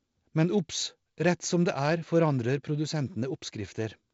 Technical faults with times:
none

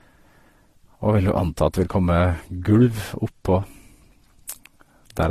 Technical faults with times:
0.00-5.30 transcoding between lossy codecs

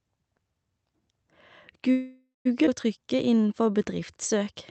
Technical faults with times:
1.91-2.47 call audio freeze
2.65-2.68 skip ahead
2.99-4.53 jitter buffer slow-down

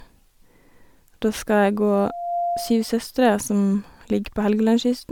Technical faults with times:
0.00-5.12 generation loss
1.93-2.95 loudspeaker feedback squeal

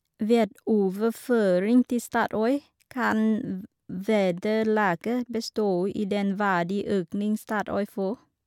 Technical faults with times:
none

